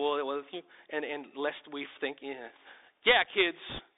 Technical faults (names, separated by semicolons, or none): Bluetooth CVSD headset codec; bit errors on a Bluetooth voice link